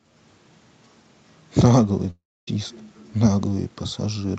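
From 2.10 to 2.48 s the speech breaks off into a fading buzz, then 0.26 s of near-silence, and resumes with 0.37 s lost, likely a long network dropout. A spectrogram shows smeared bands decaying into a blank gap, and the waveform flattens.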